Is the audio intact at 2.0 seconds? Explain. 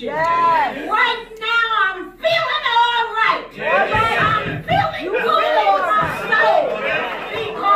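Yes, the audio is intact at 2.0 seconds, with no dropout, click, distortion or other fault at that point.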